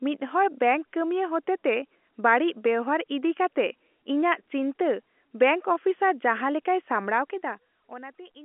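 Listening to the speech here, nothing stood out that would count as a technical problem.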